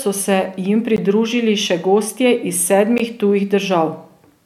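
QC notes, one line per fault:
0.97 s and 2.98 s: gap at a join of encoded pieces. The speech drops out for about 15 to 16 ms, then resumes exactly where it stopped. The two dropouts sit 2.0 s apart, which points to audio encoded in 2-second pieces and joined without trimming. Each encoder run leaves its start-up delay and the padding of its last frame in place. Those few milliseconds of silence open inside continuous speech, with edges smeared by the codec, so the silent part is shorter.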